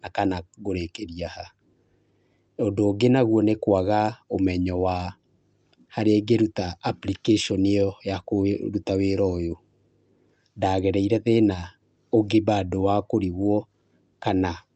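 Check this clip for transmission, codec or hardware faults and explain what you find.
No transmission or hardware faults.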